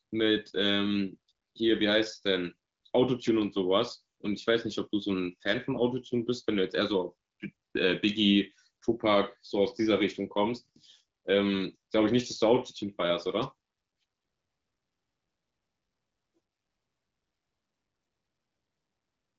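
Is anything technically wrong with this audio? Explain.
No, nothing here sounds technically wrong.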